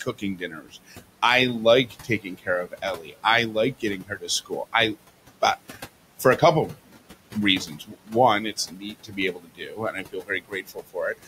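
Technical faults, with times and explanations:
Throughout: noise suppressor artifacts. The room noise, about 17 dB under the speech, is pushed down about 18 dB between phrases.
0.06–0.95 s, 1.86–2.47 s, 2.67–3.24 s (just before "I like"), 3.80–4.29 s (just after "I like"), 7.66–8.13 s and 8.53–10.96 s: speech cut by the noise suppressor. Quiet parts of the speech were taken for noise and turned down by about 13 to 18 dB. They sound swallowed and faint.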